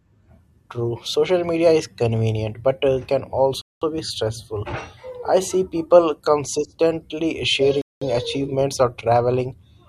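At 3.62 s the speech drops into a hard-edged hole of silence lasting 200 ms, running to 3.82 s, and the same thing happens again from 7.82 to 8.02 s. That's a gap between chunks: the audio is arriving in blocks of 4 s, and something leaves a 200 ms stretch of silence at each join. Nothing is lost, but the speech stops dead and restarts cleanly, and the holes recur every 4.2 s.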